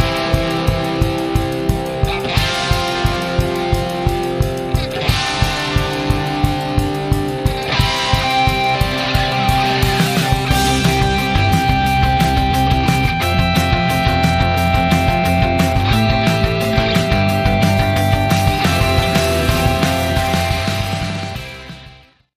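No dropouts, distortion, noise bursts or timing errors turn up anywhere in the clip, so there is nothing to flag.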